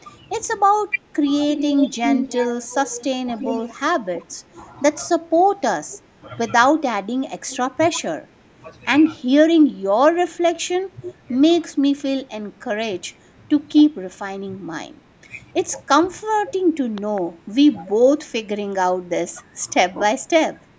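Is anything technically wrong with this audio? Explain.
Yes. The speech has two faults typical of a hands-free call.

Speech suppressed in double talk occurs at 0.89 to 0.98 s and at 8.56 to 8.60 s. The level dips by about 5 dB for a fraction of a second. This is likely an echo canceller that failed to tell near-end speech from loudspeaker echo and attenuated both.

Echo leak appears at 1.55 to 3.06 s, 3.36 to 3.74 s, 4.15 to 4.35 s, 5.90 to 5.98 s, 7.50 to 7.57 s and 11.02 to 11.14 s. A copy of the speech returns 309 ms late. It starts at about 5 dB below the speech, falls to about 25 dB below, then rises to about 15 dB below. The likely cause is residual loudspeaker pickup that the far end's canceller did not remove.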